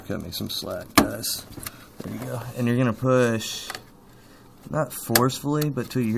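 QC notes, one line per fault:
No faults heard anywhere in the clip.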